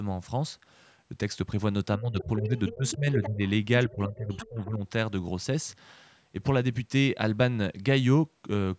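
This speech clip, whose call-path audio carries nothing above 8 kHz, has the talker's voice repeatedly ducking between 1.98 and 4.81 s. It dips at 1.98–2.56 s (by up to about 15 dB), at 2.72–3.4 s and at 3.9–4.81 s (each by up to about 20 dB), losing roughly half a second, half a second and 0.7 s of level. This is likely speech suppressed in double talk: with the far side playing on the loudspeaker while this side talked, the echo canceller could not tell its own talker from the echo and turned both down. Underneath, a second voice comes through at 2.19–2.24, 2.44–3.29, 3.88–3.93 and 4.13–4.47 s, sitting about 15 dB below the speech in the first two stretches and about 20 dB below in the last two. That is likely the other side's voice leaking through, where loudspeaker playback reached the microphone and the canceller left part of it in.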